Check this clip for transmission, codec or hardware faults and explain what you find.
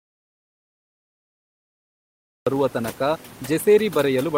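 Two faults turn up here. One hits the start and the other runs the whole way through.

From the top until about 2.47 s, there's an audio dropout to silence: plain silence with no room tone at all, then speech comes back at "ಬರುವ ತನಕ". The input was likely disconnected or muted while recording continued.

The whole clip also has overdone noise removal. The suppressor is pulling bands near its noise estimate right down, leaving twinkly specks where the room noise, sitting about 24 dB below speech, used to be.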